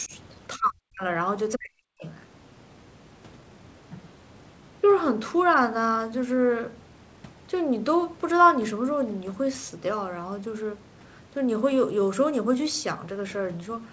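Speech, in which an echo canceller likely mistook simultaneous talk for echo and turned the near talker down with it, which is speech suppressed in double talk. The voice dips by about 10 dB at 0.07–0.12 s, then almost vanishes, by about 40 dB, from 0.57 to 1.05 s and from 1.54 to 2.05 s.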